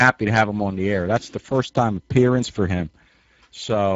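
From start to finish the speech carries plainly audible Speex codec damage. This CELP coder has too few bits for the excitation signal, so voicing comes out hoarse and noisy, which fits a bitrate near 10 kbps. Nothing survives above 7.7 kHz. Transform codecs smear into swirly, watery artefacts instead. Here the roughness sits in the voice source itself.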